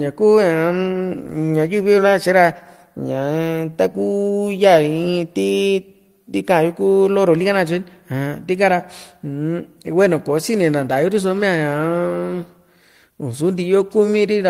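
No technical faults can be heard anywhere in this speech recording.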